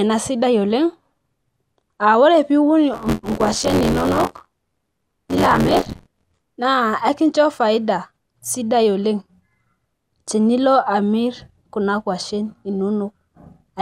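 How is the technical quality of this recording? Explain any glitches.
The recording has one clear glitch, a stretch of buffer tearing. From 2.93 to 6.43 s, the software filling the playback ring buffer and the hardware reading it fall out of step. Roughly a third of each period replays audio about 20 ms stale, joined hard on both sides. The speech takes on a robotic buzz near 86 Hz, which fits a 512-sample buffer.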